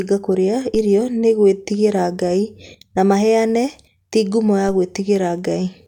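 Speech, with two DC steps, at 0.75 s and 4.69 s, where the waveform's zero line suddenly jumps by about -22 dBFS and then drains away through what behaves like a 5 Hz high-pass. Each is heard as a low thump or click, and unlike a dropout or a splice click, the speech runs straight through untouched. The offset simply settles back over a fraction of a second.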